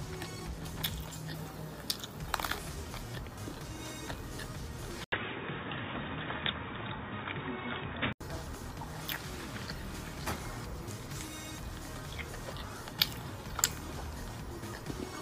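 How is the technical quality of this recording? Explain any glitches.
Quality is marred by one input fault. From 5.04 to 8.21 s the sound turns dull and boxy, with nothing above 3.8 kHz, an 80 ms gap at the switch, a level shift of around 5 dB and new background noise roughly 30 dB below the signal. The likely cause is an input switched to a poorer device, whose narrower band and own noise replace the original microphone's until it returns.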